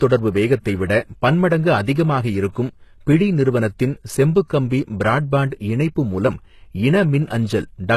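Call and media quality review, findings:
HE-AAC compression throughout: treble gritty and metallic, s sounds lispy, nothing above 12.3 kHz. Likely band replication misaligning harmonics, fitting a very low bitrate near 16 kbps.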